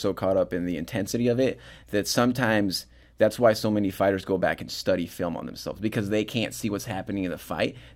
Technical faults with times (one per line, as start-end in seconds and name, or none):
none